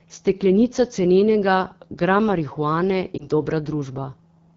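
AMR wideband (HD Voice) codec runs throughout the speech. It codes the voice up to 6.4 kHz with a pulse-driven vocal tract model and fills the top band with shaped noise. Here the damage is plainly audible: a rough, raspy texture that fits one of the lowest AMR-WB rates, around 8.85 kbit/s.

Lost AMR speech frames occur from 3.17 to 3.27 s, just after "cenenega gram marihuane". A frame failed its checksum, so the decoder reused the previous pitch and vocal tract settings at reduced gain. The result is a brief dip or warble, consistent with about 20 ms of lost audio.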